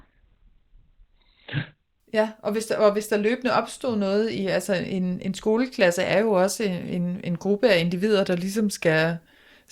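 From 0 to 2.0 s the speech sounds dull and gritty, with nothing above 4.2 kHz, then snaps clear with no gap: an adaptive stream starting at a low bitrate.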